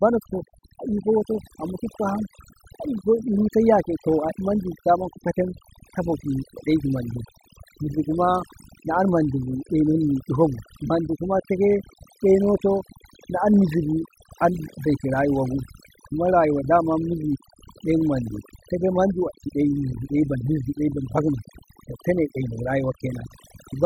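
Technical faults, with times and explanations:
Throughout, overdone noise removal: the noise suppression is set so aggressively that any frequency band near its noise estimate is pulled almost to silence, taking soft voice detail with it. The background drops to a near-silent floor scattered with twinkling specks. A spectrogram shows isolated bright dots between phrases and a patchy, holed speech spectrum.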